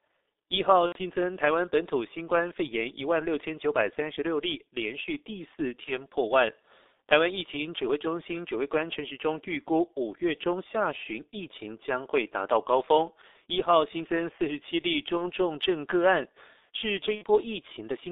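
Throughout, the speech passes through the G.723.1 codec at 6.3 kbit/s. Its coarse 30 ms frames and slowly updated voice model, confined to a 300 Hz to 3.7 kHz band, leave the speech heavily muffled and hoarse, with smeared consonants.

VoIP packet loss concealed by the speech codec occurs at 0.86–0.99 s, 5.84–5.94 s, 15.18–15.29 s and 17.15–17.24 s. The decoder keeps extrapolating its last pitch and filter with falling gain. Each gap becomes a stretched, buzzy tone or coloured noise that fades, with weak, distorted speech lingering briefly afterward.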